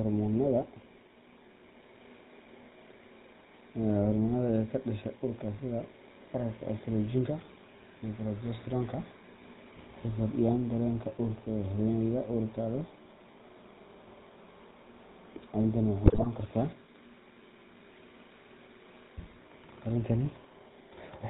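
Speech recorded through a GSM full-rate codec, and the codec damage is plainly audible from start to finish. The codec rebuilds the voice from a vocal-tract filter driven by a sparse, regularly spaced pulse excitation, so the speech has a buzzy, gravelly roughness and nothing above 4 kHz, which fits a 13 kbps full-rate stream. Between 16.04 and 16.27 s there are GSM bit errors. For about a quarter of a second the sound breaks into squawks, pops and gargling. Corrupted filter, pitch and gain parameters reaching the decoder reshape the spectrum and gain frame by frame. The density of the damage points to a high error rate on a weak radio link, hitting roughly a dozen consecutive frames.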